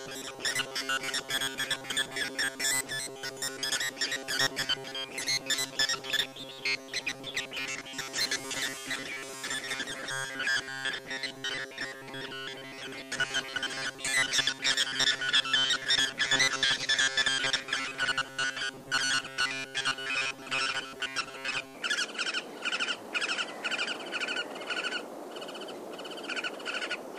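From 0.01 s to 21.75 s the audio has a robotic sound from repeated short buffers. A rigid, metallic buzz at 134 Hz sits over the material, which still tracks its rough shape but loses detail. The likely cause is audio arriving too seldom, so the playback side loops the last fragment, about 7.5 ms long, to fill the gaps. That repeat length sets the fixed pitch, and the looping covers most of that stretch.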